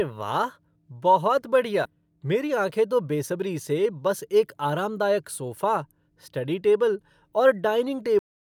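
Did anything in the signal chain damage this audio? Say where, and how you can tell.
Yes, three problems, all downstream of capture in the network and playback path. At 1.85 to 1.87 s there's a skip ahead: the speech jumps forward with no gap at all, and roughly 400 ms of it is simply gone, the two sides butted together almost seamlessly. That's the jitter buffer, or the network before it, throwing away a chunk while later audio was already queued, so the delay dropped by that same amount.

Right after, from 1.95 to 3.93 s, the jitter buffer speed-up kicks in. The talker sounds rushed, running at about 111% of normal pace, but the pitch doesn't rise. That's the giveaway: the receiver is trimming tiny slices one or a few pitch periods long, over and over, to drain excess buffered audio, about 200 ms in total across those two seconds.

Finally, there's a cut-off end at 8.19 s. The speech stops dead mid-sound and goes straight to digital silence with no natural decay. 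That points at playback or the write to storage: the last buffers never made it out, so the final third of a second or so is just missing rather than fading away.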